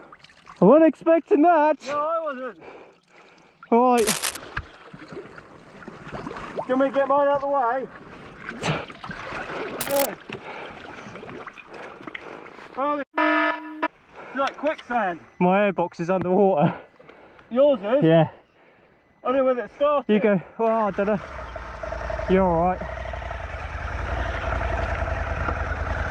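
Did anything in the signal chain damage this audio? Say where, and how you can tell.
Yes, in the analogue wiring. There's cable scratch noise at 3.97 to 4.37 s and again at 9.79 to 10.06 s: dense, ragged rustling sitting only a few dB under the sound itself. That's likely a worn cable or connector being moved, its contact resistance jumping around.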